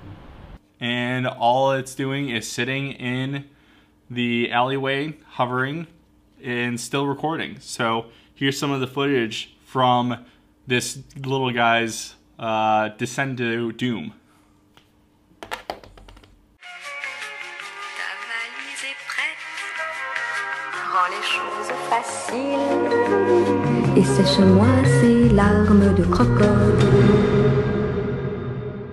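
No technical faults can be heard anywhere in the audio; the signal stays stable and continuous throughout.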